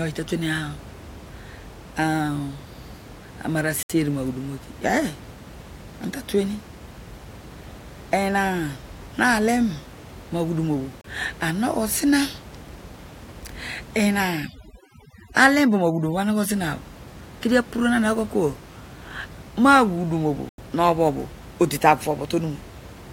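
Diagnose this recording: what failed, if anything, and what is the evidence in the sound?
Bluetooth stall at 3.83, 11.01 and 20.49 s: the speech drops to silence for 68, 31 and 91 ms, then resumes. At the playback stage, this is likely a wireless link where interference delayed packets long enough for the receiving buffer to empty and output to pause.

Overdone noise removal from 14.22 to 16.54 s: in this processing stage, the room noise, otherwise about 19 dB under the speech, drops and breaks up into twinkling specks. An aggressive suppressor is cutting bands near its noise estimate, taking quiet speech components with them.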